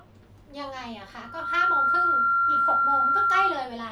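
From 1.19 to 3.70 s, loudspeaker feedback squeal: a 1.4 kHz tone swells in under half a second, then rings about 10 dB above the speech as the microphone-loudspeaker loop exceeds unity gain.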